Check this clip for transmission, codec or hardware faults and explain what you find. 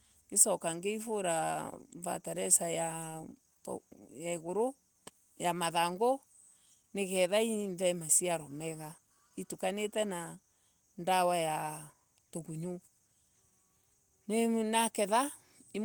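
Two related faults run through the speech: a clock mismatch between the two ends, and the steady stream of small corrections it forces.

Clock drift between sender and receiver is present for the whole clip. The sender's audio clock runs roughly 5 percent fast, so audio arrives quicker than the receiver plays it out and the jitter buffer keeps swelling. The receiver has to discard material to keep latency in check. Unlike network jitter or packet loss, the disturbance never lets up and always pushes the same way, so it stems from mismatched clocks rather than from the network.

Repeated timing corrections run from 0.22 s to 15.84 s, and their net effect is playback at about 105 percent of the original pace. Because the sender is ahead, each correction removes a short slice of audio rather than repeating one. The slices are tiny and unevenly spaced, so the speech sounds slightly rushed, with faint hiccups and an unsteady rhythm instead of clean gaps. 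Packet loss would leave isolated dropouts or smeared concealment at scattered moments, not a continuous, one-directional tightening of the timing.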